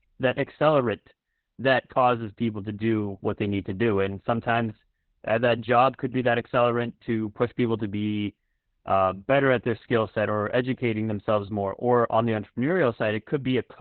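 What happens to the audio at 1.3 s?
At 1.3 s, as throughout, Opus voice compression is audible. SILK narrowband coding cuts the band near 4 kHz and quantises excitation coarsely, fitting roughly 8 kbps, leaving muffled, hoarse speech.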